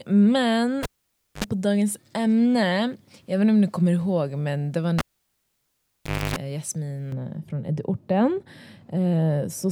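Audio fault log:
0.83–1.44 s and 4.99–6.36 s, cable pulled and plugged in: each starts with a pop, then the signal drops to near silence for about 0.56 s and 1.33 s, respectively. A 50 Hz mains buzz follows, lasting 62 ms and 282 ms, while only the plug tip makes contact. A second pop marks the signal's return. The first event ends just before "på dagens ämne", and the second begins right after "ihåg men det var". On a spectrogram, the pops appear as thin broadband vertical lines around a dark gap, with the buzz shown as horizontal stripes at 50 Hz multiples. On a waveform, the pops are sharp spikes and the gap is a flatline.
7.12–9.71 s, de-emphasis applied wrongly: a treble cut intended to undo pre-emphasis was applied where there was none or was applied twice, so the response slopes smoothly downward and sits about 11 dB lower at 10 kHz than at 1 kHz. The sound turns dull and muffled. 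On a spectrogram, energy fades gradually toward the top bands with no hard edge.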